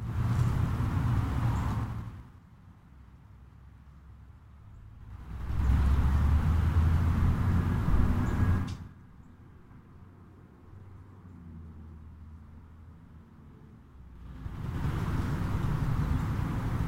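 Zipper noise marks each level move. The level drops by about 25 dB from 1.70 to 2.42 s, rises by about 25 dB from 4.96 to 5.72 s, drops by about 25 dB from 8.56 to 8.94 s, and rises by about 25 dB from 14.11 to 14.87 s. Each move is made in unsmoothed 3 dB jumps rather than a continuous ramp. Each jump clicks, giving a ticking at roughly ten steps per second, and about twice that on the faster drop at 8.56 s.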